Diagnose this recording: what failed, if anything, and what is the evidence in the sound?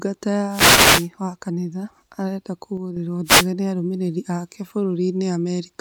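Two wireless microphone noise hits come from the analogue radio link ahead of the converter: bursts of static from 0.49 to 1.09 s, ending just before "wa kanitha arenda", and again from 3.25 to 3.47 s. Multipath cancellation faded the FM carrier, letting receiver noise rise.

A sudden gain jump occurs from 2.77 to 2.97 s, after "wa kanitha arenda". Speech and background noise drop together by about 6 dB, abruptly rather than gradually. The likely cause is a digital gain change applied between adjacent samples without a ramp.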